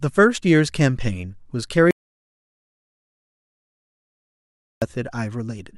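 At 1.91 s the input signal stops reaching the recorder, likely because the microphone link dropped or a mute was engaged, while the recorder keeps writing silence until 4.82 s. This is an audio dropout to silence lasting about 2.91 s. The speech cuts off abruptly mid-flow and resumes just as suddenly. The gap between is dead silence with no room tone at all, and whatever was said during it is lost.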